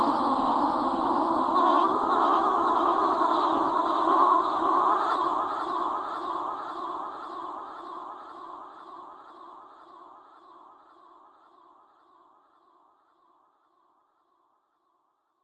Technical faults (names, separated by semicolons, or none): jitter buffer speed-up